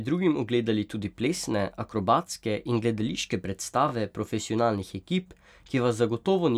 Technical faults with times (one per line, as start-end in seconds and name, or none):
1.37-1.39 overlapping chunks
3.89-3.91 overlapping chunks